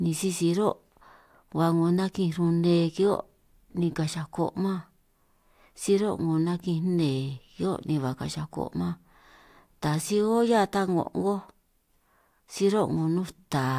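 No technical faults can be heard anywhere in the recording; the signal stays intact and continuous throughout.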